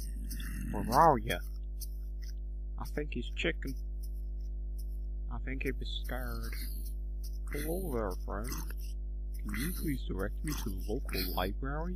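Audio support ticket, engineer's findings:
Mains hum, whole clip: steady 50 Hz tone with low harmonics, about as loud as the program sound. Ground loop or nearby transformer coupling the power line into the signal path. Fixed pitch, unlike rumble's irregular, drifting low end.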